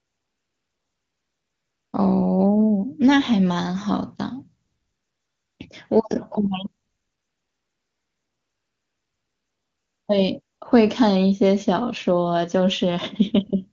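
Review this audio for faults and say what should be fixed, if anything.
The sending phone's voice activity detection judged the talker silent and stopped transmitting speech frames four times: from 0.0 to 1.93 s, 4.65 to 5.59 s, 6.83 to 10.07 s, and 10.41 to 10.61 s. During each gap the receiver generated AMR comfort noise from a rough estimate of the background's level and spectral shape. The real room sound is replaced by a smooth, steady hiss that switches in and out at those boundaries, and quiet sound near each edge can be clipped. The clean wideband speech between the gaps points to a high-rate AMR-WB mode. To prevent this, disable discontinuous transmission on the link, or make the voice activity detector less aggressive so that it holds speech frames through short pauses and low-level background.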